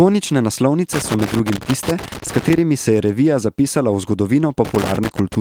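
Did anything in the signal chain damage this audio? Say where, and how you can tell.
Yes. The damage is in the analogue wiring, and it sounds like loose connector crackle. Irregular bursts of scratching and crackle run from 0.93 to 2.58 s and again from 4.65 to 5.35 s. The speech breaks up unevenly within those spans. That points to a worn or dirty contact opening and closing as the plug shifted. Each break chops the signal. Any DC on the line then jumps and clicks.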